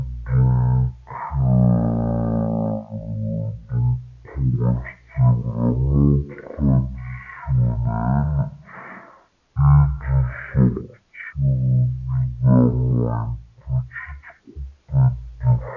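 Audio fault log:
Throughout: wrong sample rate. The whole speech track crawls along at one third of its proper speed and sits about 19 semitones low, so it comes across as a deep, syrupy drawl. Speed and pitch have dropped together by exactly the same factor, which is the giveaway that nothing was resampled. The samples are just being clocked out three times too slowly, which fits 48 kHz material being played back at 16 kHz.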